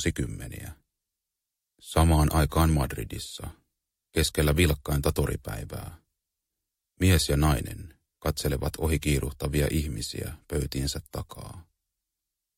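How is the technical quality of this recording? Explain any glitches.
No glitches or technical faults are audible anywhere in the recording.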